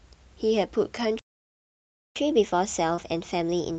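At 1.19 s the speech stops dead in mid-flow. Silence holds until 2.16 s, a gap of about 0.97 s. This is a playback stall. The player had nothing to send to the output for that stretch. The likely cause is that it ran out of buffered data or its thread was blocked.

From 2.16 s to the end of the clip, the speech runs fast. This is catch-up at higher speed. The player is draining the backlog left by the stall. It resamples the audio to play at 1.1 times normal speed. Because it resamples, pitch rises along with tempo, by roughly one and a half semitones. The voice sounds slightly hurried and a little higher until the clip ends.

Between 2.95 s and 3.00 s there is a short concealed packet loss. About 20 ms of audio never reached the decoder in time. The receiver filled the hole with about 22 ms of invented sound. It extended what came just before and then blended back into the real signal. 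It is heard as a brief smear in the sped-up speech. The audio reaches up to about 8 kHz, consistent with the Opus call path, which sounds like it runs near 32 kbps.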